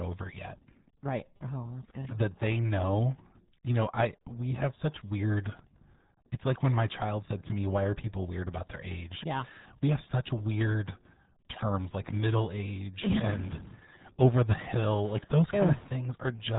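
Throughout, the RealAudio 14.4 codec cuts everything above 3.8 kHz and leaves gargly, muffled artefacts, which fit an 8 kbit/s dial-up speech coder rather than simple low-pass filtering.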